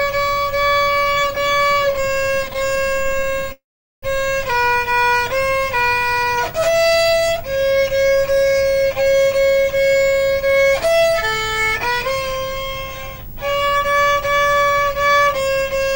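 Running under the whole clip there's a video or display buzz: a 50 Hz hum-buzz at the picture's field rate with grainy hash riding on top, plus a thin whine up at 15.6 kHz from the line rate. It sits about 20 dB below the program. It's what you get when a screen or video cable couples into the audio path, picking up the field and line scanning and leaking them in as interference.

From 1.19 to 3.52 s you get repeated stalls, a stutter. The audio keeps catching for tiny moments, lots of short gaps of up to 18 ms each. The receiver holds the last bit of sound to paper over each one, and those patches add up to roughly 0.62 s, about a quarter of that stretch. Packets were showing up late or slower than playback, so the buffer kept running dry. Nothing actually goes missing, but it drags and stumbles.

Right on the end of that, from 3.52 to 4.04 s, the audio freezes for about half a second. 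There's a brief held tail of the last sound, then roughly 0.42 s of silence before things carry on exactly where they left off. This is a call audio freeze, likely from packets getting held up in transit long enough to empty the jitter buffer completely. The sound isn't lost, just pushed back by that half second.

Between 5.17 and 6.53 s there's a jitter buffer slow-down. Playback drops to about 90% speed with the pitch unchanged, so sounds get drawn out and there's a slight warble in places. The receiver was rebuilding its reserve by repeating single pitch periods and bits of pauses over and over, stretching things by about 0.14 s in total.

Then the opposite happens with two jitter buffer speed-ups. The first runs from 8.05 to 11.09 s at about 109% speed, and the second from 11.86 to 15.91 s at about 106%. Each one trims roughly a third of a second, so the audio sounds hurried while the pitch stays put. 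The buffer had taken on more than it wanted, probably after delayed packets arrived in a bunch, and it worked the backlog down by cutting out short pitch-period slices again and again.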